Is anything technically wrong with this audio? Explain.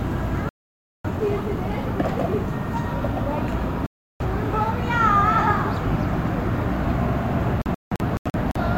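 Yes, there are three digital broadcast dropouts. Each time, the receiver stopped getting valid frames and muted until clean ones returned. The sound cuts out from 0.49 to 1.10 s and from 3.86 to 4.25 s. Between 7.62 and 8.60 s it breaks into several short holes totalling about 430 ms, the longest about 170 ms. Whatever was broadcast in those gaps is gone.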